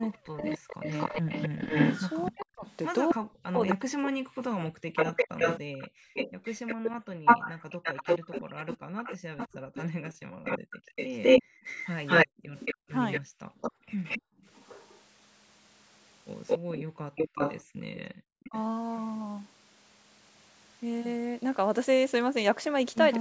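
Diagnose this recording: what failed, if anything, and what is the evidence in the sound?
A delayed copy of the speech trails it from 0.01 to 18.59 s, arriving about 261 ms late and roughly as loud as the original. This is an echo leak in call processing, likely an echo canceller returning loudspeaker sound its microphone picked up.

The speech repeatedly dips very deeply or breaks into pieces between 0.25 and 5.4 s (about 3 s in total), 8.31 and 9.17 s, and 16.79 and 18.54 s. This is likely speech suppressed in double talk: with both directions active, the canceller turned down the talker along with the echo.

The room background drops by about 40 dB and then returns between 5.68 and 7.25 s, 9.58 and 14.38 s (about 2 s in total), and 17.63 and 18.19 s. This is background gated by the echo canceller, which clamped the microphone hard while its loudspeaker was playing.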